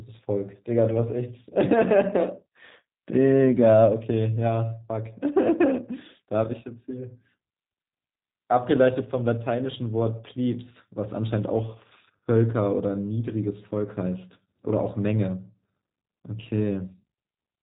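From start to finish the speech carries plainly audible G.729 codec damage, consistent with G.729A at roughly 8 kbit/s. Each 10 ms frame is rebuilt from a vocal tract model, pitch predictor and sparse pulses, so the speech sounds rough and synthetic, with nothing above 3.8 kHz.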